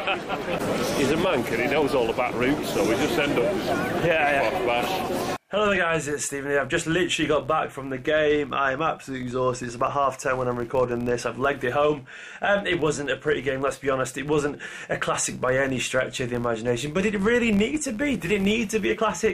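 Throughout, a filter restarted on every block starts each from silence, heard as an 86.1 Hz buzz that follows the level, fitting 512-sample blocks.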